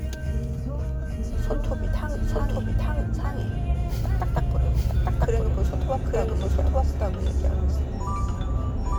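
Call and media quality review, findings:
Doubled audio track, whole clip: every sound returns about one second later at roughly equal level, full-band, no decay or room colouring. Unlike acoustic echo, there's a single undamped repeat. Likely cause: second capture path or misaligned edit mixing a late copy.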